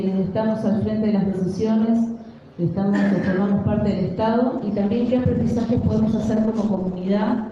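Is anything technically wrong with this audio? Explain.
Yes. From 4.59 s to the end, a call bitrate drop sets in. The encoder runs starved, coding coarsely and trimming highs, so the sound turns rough and muffled, consistent with roughly 32 falling to 11 kbps.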